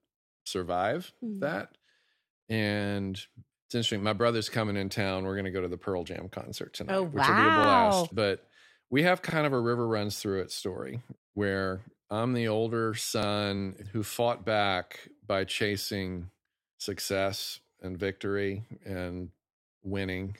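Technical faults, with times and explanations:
7.64–7.68, 9.30–9.34 (between "we have" and "of a river runs"), 13.23–13.27 s (after "where I'm the older"): repeated buffer. Each time, a 43 ms piece, consistent with a 2048-sample buffer, plays twice with a hard join, giving a brief stutter. Unlike a dropout, there is no silence, only a duplicated fragment.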